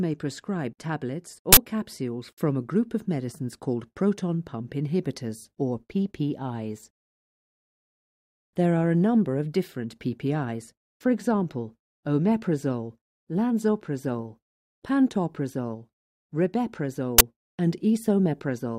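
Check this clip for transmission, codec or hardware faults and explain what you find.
There are two bursts of uninitialised buffer noise. At 1.53 to 1.57 s, about 43 ms, and at 17.18 to 17.21 s, about 21 ms, blocks played before audio was written, so leftover memory came out as harsh, loud digital noise. The lengths fit 2048- and 1024-sample blocks.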